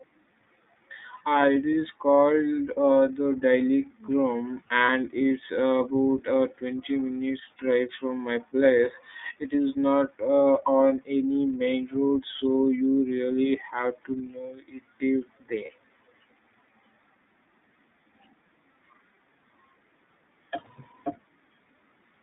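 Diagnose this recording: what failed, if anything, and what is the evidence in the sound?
The codec stage is responsible for the audio's constant character. The speech is confined to roughly 200 Hz to 3.7 kHz, with nothing above, and has a plainly audible rough, slightly synthetic texture typical of the iLBC codec. That fits iLBC's 30 ms frame mode at 13.33 kbps, where each frame's excitation is coded independently of the last. The lost upper band and the coarse excitation modelling together account for the thin, rough quality.

The network stage produced lost iLBC frames at 4.85 to 4.90 s and 15.65 to 15.69 s. Each event is one missing 30 ms frame that the decoder concealed by repeating the previous pitch cycle mixed with noise. At both points this is heard as a brief held, faintly buzzy vowel-like sound in place of the real signal. Because iLBC frames decode independently, the speech recovers immediately after each gap.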